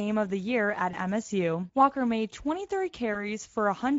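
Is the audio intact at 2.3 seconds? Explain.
No. At 2.3 seconds the Speex codec damage is present, as it is throughout the clip. This CELP speech coder models the voice with a vocal-tract filter driven by a coded excitation signal. At a rate that fits roughly 17 kbps, too few bits go to that excitation, so the fine detail of the speech is replaced by coarse approximation. The damage is plainly audible: the speech sounds noisy and hoarse, with a grainy edge.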